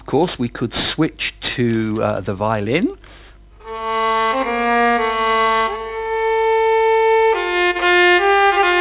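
Aliasing runs through the whole clip. It sounds like the rate was dropped, probably to 8 kHz, without a proper low-pass first, so content above 4 kHz folds back down into the band. Bright sounds turn gritty and metallic, with the folded junk sitting roughly 20 dB under the signal.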